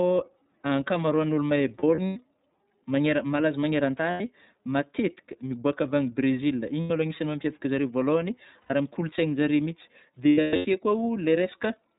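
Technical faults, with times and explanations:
throughout: iLBC codec, narrowband coding at 13.33 kbps in 30 ms frames; nothing above 4 kHz, spectrogram shows a hard ceiling there, speech slightly rough and synthetic.
1.79–2.16 s, 4.11–4.21 s, 6.81–6.90 s, 8.61–8.71 s, 10.29–10.66 s: lost iLBC frames, 90 to 300 ms missing per event; decoder repeats the last pitch cycle with noise, heard as a held buzzy vowel, seen as smeared flat harmonic bands before speech resumes.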